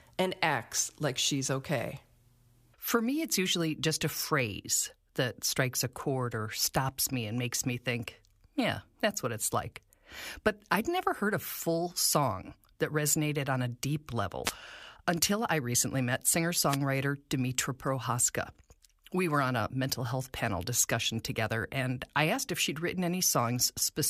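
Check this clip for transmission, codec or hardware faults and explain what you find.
Two wireless microphone noise hits affect this speech clip, at 14.44 to 14.52 s and at 16.68 to 16.77 s, each lasting under a tenth of a second. In both, the analogue FM radio link from the microphone briefly faded as reflected signal paths cancelled the direct one, so the receiver's own noise rose above the weakened carrier. Each shows up as a short burst of static swishing across the voice.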